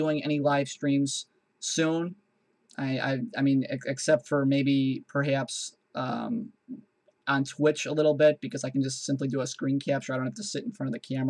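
No technical faults can be heard anywhere in the clip. Nothing interrupts or alters the sound at any point.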